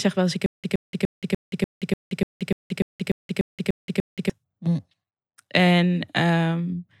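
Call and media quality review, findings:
Stutter with silent gaps, 0.46–4.30 s. Playback likely stalled, each retry replaying the last buffered fragment then running dry. Same 119 ms speech burst repeats 13 times every 295 ms, 176 ms digital silence between. Intervening audio lost.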